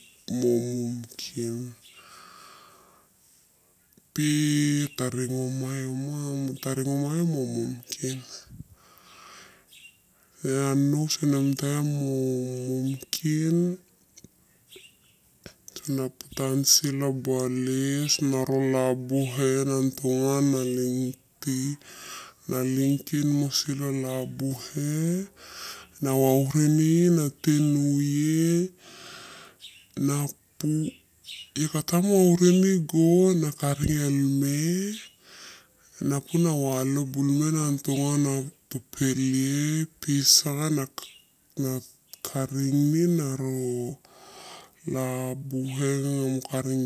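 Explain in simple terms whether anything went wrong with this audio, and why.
Wrong sample rate throughout: the speech runs at about 0.73 times normal speed and about 5.5 semitones lower. Speed and pitch fall together, unlike simple slowing, which keeps pitch.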